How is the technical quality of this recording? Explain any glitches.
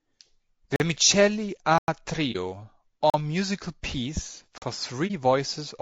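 The recording has clear technical problems: coarse compression throughout and six short dropouts of two different kinds.

The low-delay AAC compression affects the whole clip. The speech sounds rough and grainy. Noise sits between the harmonics, and the top band sounds dulled and synthetic. This is likely AAC-ELD at a low bitrate, around 32 kbps. Its short frames resolve pitch harmonics poorly.

Blocks of digital silence occur at 0.76–0.80 s, 1.78–1.88 s, 3.10–3.14 s and 4.58–4.62 s. Most last 40 ms, and the second lasts about 99 ms. The sound cuts out and back with no fade. The longer gap sounds like a hole rather than a tick.

AAC frame loss with muting occurs at 2.32–2.36 s and 5.07–5.11 s. Each gap is about 30 ms, which fits one lost frame. The decoder zeroed the missing spectrum, and the overlapping windows fade the sound out and back in. These are brief dips.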